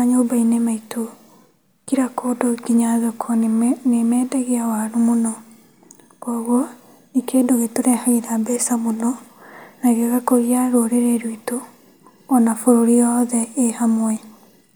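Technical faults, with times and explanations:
No technical faults heard.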